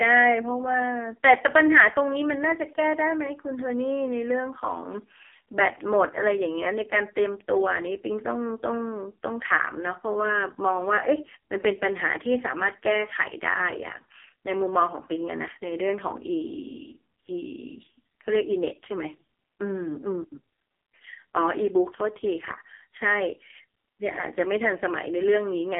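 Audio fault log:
Throughout: AMR narrowband mobile codec. The speech sits between 300 Hz and 3.4 kHz, with nothing above 3.5 kHz. It sounds heavily buzzy and synthetic, which points to a low AMR-NB mode near 5 kbps. A plain telephone band filter narrows sound without this vocoded buzz.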